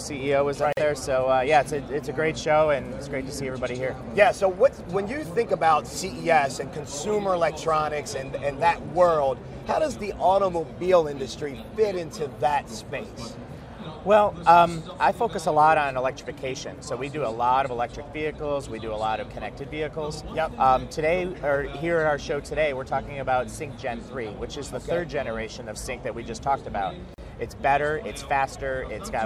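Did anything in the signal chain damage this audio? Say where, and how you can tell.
Yes, at the codec stage. There is a gap at a join of encoded pieces near 0.73 to 0.77 s (about 46 ms) and 27.14 to 27.18 s (40 ms). Untrimmed encoder start delay and end padding insert silence. Unlike a network dropout, the sound resumes exactly where it stopped, with codec-softened edges.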